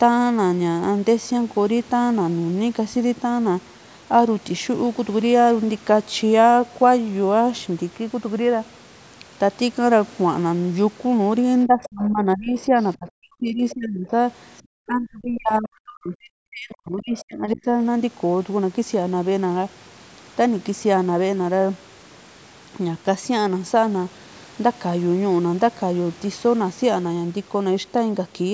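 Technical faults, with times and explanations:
11.66–12.77 s, 12.97–14.12 s and 14.87–17.68 s: speech suppressed in double talk. The speech sinks by roughly 25 dB in the first stretch and about 40 dB in the later two, over about a second, a second and three seconds. The dips are likely an echo canceller ducking the talker while the far side also spoke.
11.83–11.89 s, 13.70–13.75 s and 17.18–17.24 s: other side's voice leaking through. Brief scraps of a second voice, about 20 to 25 dB below the speech, sit inside the suppressed stretches. This is likely far-end echo that the canceller left in the microphone signal. Unlike room reverberation, these scraps are a separate voice, not a tail of the talker's own.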